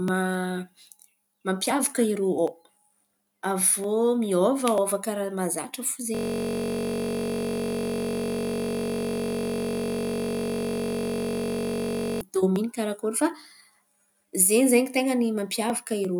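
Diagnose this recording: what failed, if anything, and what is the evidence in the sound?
System hang loop, at the driver or buffer stage. From 6.15 to 12.21 s, after "mahazatra fo", the speech becomes a steady 46.9 Hz buzz. One 21.33 ms slice repeats exactly, which fits a 1024-sample buffer. The host froze while the hardware kept cycling it. Speech returns at "karakôry fa".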